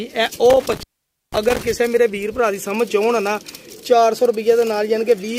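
An intermittent contact fault affects the audio between about 0.50 s and 1.63 s, where the signal cuts out. A loose plug or cable connection briefly breaks the circuit, so the sound drops away for roughly 0.49 s in total within that stretch. The contact opening and closing produces crackle at the edges of each dropout, and while the line is open only a faint hiss remains instead of the programme material.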